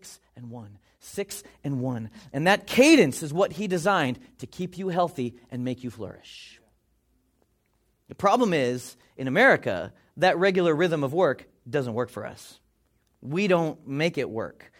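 No technical faults can be heard anywhere in the recording: the signal stays continuous and steady throughout, with no dropouts, level jumps or other transmission problems.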